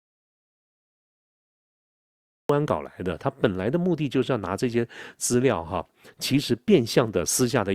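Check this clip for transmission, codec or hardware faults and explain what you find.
There is one fault: an audio dropout to silence covering the opening of the clip. From the very start until 2.49 s there is nothing at all, not even room tone; the track is dead silence, and then the speech arrives abruptly in mid-flow rather than beginning naturally. The gap was already under way when the clip begins. The likely cause is lost input, from a disconnected device, a failed link or a mute, while the recorder kept writing silence, so whatever occurred in those seconds is gone.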